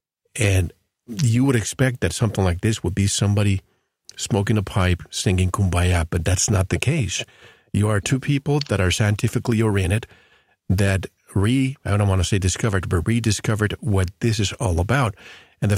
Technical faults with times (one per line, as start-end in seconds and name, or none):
none